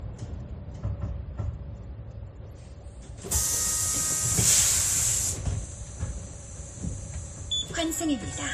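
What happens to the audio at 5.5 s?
At 5.5 s, as throughout, the sound shows transcoding between lossy codecs, likely a low-rate MP3 re-encoded to WMA. Layered swirly, smeared artefacts sit over dull highs, and a spectrogram shows a flat ceiling at 15.2 kHz.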